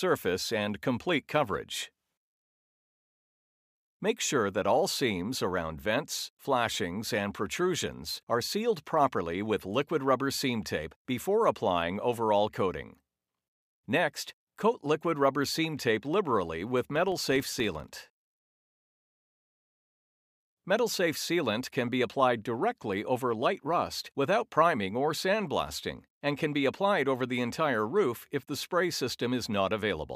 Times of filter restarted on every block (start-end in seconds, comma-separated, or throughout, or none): 16.96-18.23